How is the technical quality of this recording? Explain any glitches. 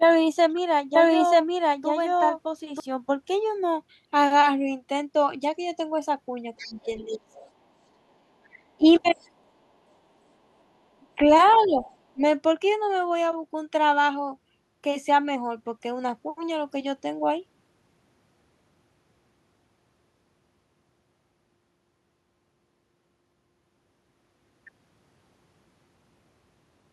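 The recording has two linked echo-cancellation problems in the middle of the clip, each occurring three times.

Other side's voice leaking through, at 6.57 to 7.5 s, 8.44 to 9.3 s and 11.46 to 11.96 s: a second, faint voice sits roughly 20 to 30 dB below the main speech, likely loudspeaker playback that the echo canceller failed to remove from the microphone.

Speech suppressed in double talk, at 6.6 to 7.35 s, 8.77 to 9.05 s and 11.0 to 12.21 s: the main voice dips by about 20 to 25 dB in short pieces, most noticeably around 6.6 and 11 s. The echo canceller likely turned everything down while both sides talked at once.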